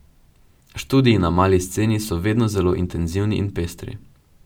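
A short speech recording with no audible technical faults: the signal holds steady throughout, with nothing in it that points to a problem in capture, processing or transmission.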